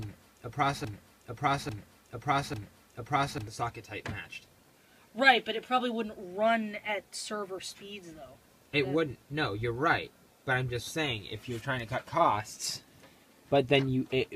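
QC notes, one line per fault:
0.00–3.47 s, broken-record loop: the clip opens already caught in it, with one chunk of about 0.85 s replaying back to back, three times over, each pass identical. It sounds like a skipping CD because nothing new arrives until the loop lets go at 3.47 s. The likely cause is a stalled player or stream that kept resending its last held fragment, so whatever belonged in those first three and a half seconds is gone.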